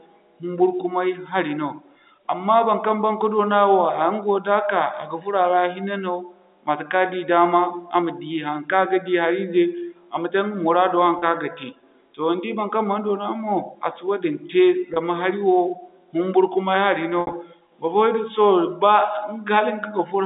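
Packet loss with pitch repetition at 11.19 to 11.22 s, 14.94 to 14.96 s and 17.21 to 17.33 s. The receiver bridges 30 ms, 20 ms and 80 ms gaps by repeating the last pitch period. The first two give brief held, buzzy patches, while the last one is scattered over 120 ms with a longest run of 60 ms that fades briefly into silence before the speech cross-fades back, which fits 10 ms packets, all within the narrow telephone band.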